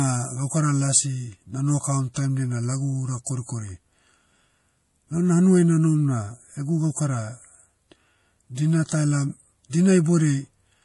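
From start to finish, the speech carries a plainly audible watery, swirly texture with chirpy s sounds and smeared onsets, likely MP3 compression at a low rate, which fits roughly 48 kbps. A spectrogram shows a hard ceiling at 11.4 kHz and flickering, patchy gaps where weak frequency detail drops out.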